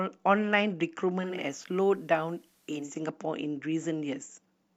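At 1.16 s there's digital radio blending to analogue: the receiver loses its digital stream and cross-fades over about a third of a second to the FM broadcast, so faint hiss creeps in well under the signal and the level dips about 2 dB, until it blends back at 3.03 s.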